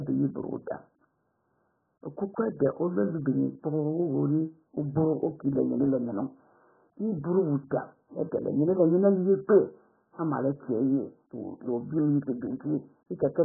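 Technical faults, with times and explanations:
Throughout, AAC compression: speech sounds dull, smeared and warbling, with nothing above 1.7 kHz, likely from heavy AAC-LC coding at about 8 kbps.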